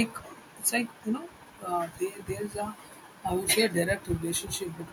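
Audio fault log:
0.88–1.04 s and 3.03–3.22 s, echo leak: a faint copy of the speech returns 192 ms late, about 35 dB down, likely an echo canceller missing loudspeaker pickup. On a spectrogram it shows as a weak, time-shifted repeat of the speech harmonics.
3.86–4.08 s, speech suppressed in double talk: the speech dips by up to about 25 dB in pieces totalling roughly 150 ms, likely the echo canceller muting the talker while both sides spoke. On the waveform the envelope shows notches.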